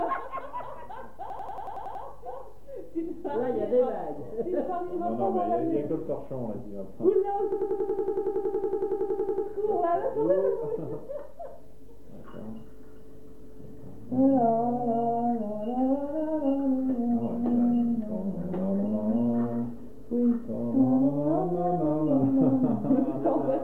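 The audio has two system hang loops, from 1.30 to 2.04 s and from 7.52 to 9.47 s. In each, the same 92.88 ms piece repeats exactly, which fits a 4096-sample ring buffer being replayed while the system froze. At a 10.8 Hz loop rate this gives a machine-gun stutter rather than a buzz. Unlike a dropout there is no silence, and unlike concealed packet loss the repeats are identical, eight and then 21 times.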